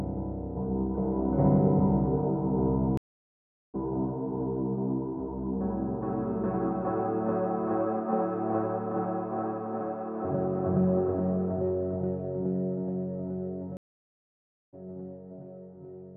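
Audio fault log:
2.97–3.76 s, stream reconnect: the sound drops out for about 0.76 s and comes back roughly 0.7 s further on. The connection broke, the player sat silent, then reconnected and started a fresh decoder at the live position, skipping the material in between.
13.77–14.74 s, stream reconnect: a longer gap of about 0.96 s, and the sound resumes about a second later than where it stopped, from the same break, reconnect and fresh-decoder restart.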